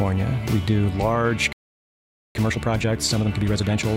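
At 1.53 s the sound cuts out mid-flow and stays silent until 2.35 s, a gap of about 0.82 s. This is a playback stall. The player most likely ran short of data or was blocked. Output simply stopped until it recovered.

From 2.35 s to 3.89 s comes time-compressed catch-up. The player trims its backlog by dropping small slices and cross-fading the joins. The audio runs about 1.5 times fast. Pitch stays normal, but it sounds hurried.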